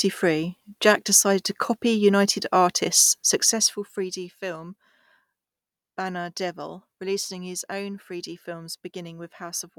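Speech clip with zipper noise from 3.16 to 4.32 s: the level drops roughly 15 dB in unsmoothed 2 dB steps, about seven per second, each step clicking audibly.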